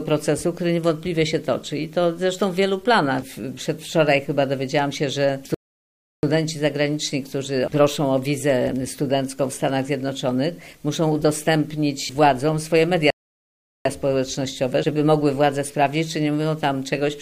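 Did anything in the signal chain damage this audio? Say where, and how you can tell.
Yes. A playback stall cuts the sound off mid-flow from 5.54 to 6.23 s (about 0.69 s) and again from 13.10 to 13.85 s (about 0.75 s). Each time, the output drops to silence and then resumes, which points to the playback stage. The likely cause is the player's buffer running dry, or its output thread being blocked, so no samples reached the device until it recovered.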